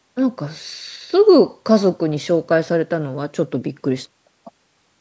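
Speech recording with no technical faults to report.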